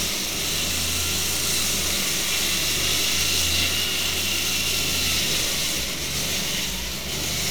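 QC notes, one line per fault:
No faults to note for this sound clip.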